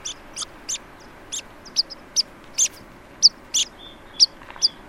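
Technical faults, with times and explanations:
0.34–0.44 s, corrupt frame decoded: a brief glitch of misplaced energy peaks at about -15 dBFS. Flipped bits in the compressed data gave the decoder wrong gains and codes, so energy landed at wrong frequencies. The 0.1 s span suggests several damaged frames.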